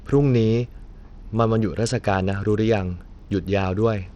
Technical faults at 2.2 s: Bluetooth SBC compression

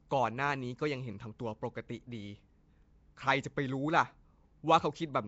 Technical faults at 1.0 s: Nellymoser compression

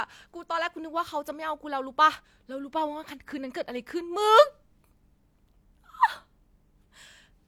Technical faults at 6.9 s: none

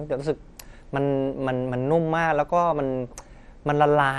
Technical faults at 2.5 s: MP2 compression

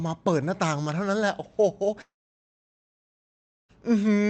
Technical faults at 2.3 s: long network dropout

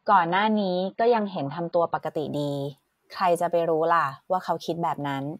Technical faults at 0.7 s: adaptive stream starting at a low bitrate

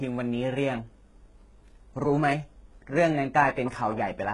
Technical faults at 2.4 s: HE-AAC compression

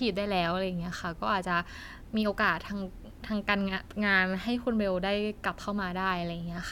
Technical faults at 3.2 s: none

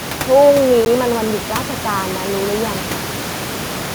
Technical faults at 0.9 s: Bluetooth stall

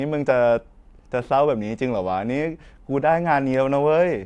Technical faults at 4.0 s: none

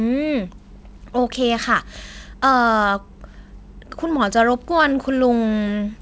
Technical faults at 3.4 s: none

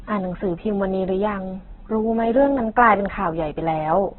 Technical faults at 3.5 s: Opus compression

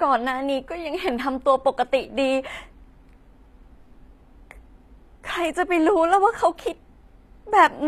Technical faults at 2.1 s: HE-AAC compression

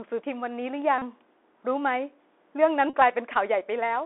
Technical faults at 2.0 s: Bluetooth CVSD headset codec

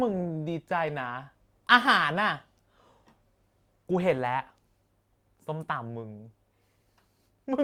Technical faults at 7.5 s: none

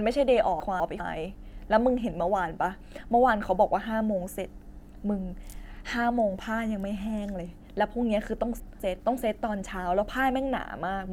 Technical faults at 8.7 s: chunks out of order

